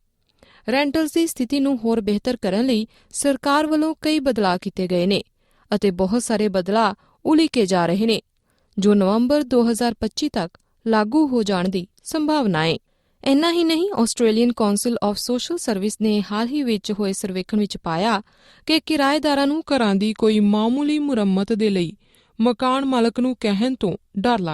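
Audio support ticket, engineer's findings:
Wrong sample rate, 19.63 s to 24.53 s: pitch falls 1.47 semitones and tempo slows to 0.919x, both shifting together. Fits 48 kHz material clocked out at 44.1 kHz with no resampling. Check output device rate negotiation.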